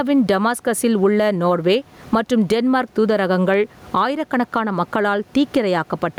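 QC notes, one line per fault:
Throughout, gain pumping: the room noise sits about 36 dB under the speech, and the gain swings by around 15 dB, so everything sounds squashed together. Likely a fast limiter clamping down on gain set far too hot.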